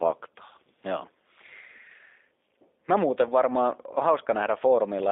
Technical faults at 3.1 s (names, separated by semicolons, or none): G.729 codec